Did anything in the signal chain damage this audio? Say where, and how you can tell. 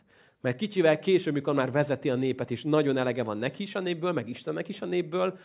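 No, nothing along the way seems to have harmed this speech recording, so there's no stage to point at.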